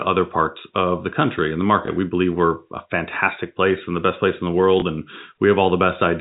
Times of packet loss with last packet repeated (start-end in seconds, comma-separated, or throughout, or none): 1.86, 4.80-4.82